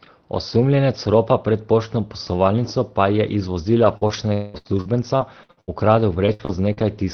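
Right after "poslovalnico pa je iz", at 3.83 s, a packet was lost and the decoder played the low-bitrate backup copy carried in the next packet. That lost packet rebuilt from error correction leaves no gap, just a brief rougher, noisier patch. The same recovery happens again at 4.01, 4.09 and 4.13 s.

Between 3.97 and 4.03 s, and again from 4.07 to 4.11 s, packets missed the decoder entirely. The receiver extended the preceding sound for about 40 ms and then 20 ms. Each short concealed packet loss is heard as a small smear or wobble.

From 4.33 to 4.56 s the speech turns into a fading buzz or hiss continuation lasting roughly 0.2 s. This long network dropout is likely due to packets not arriving for that stretch, and the lost part never returns.

From 4.54 to 6.79 s, ten separate gaps of up to 71 ms strike in quick succession. Each is patched, some partly from backup copies, so about a fifth of that stretch is synthesised. 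The result is the choppy quality, with pieces missing, of repeated packet loss (robotic sound). All of this sits on the Opus call path, whose audio tops out around 6 kHz.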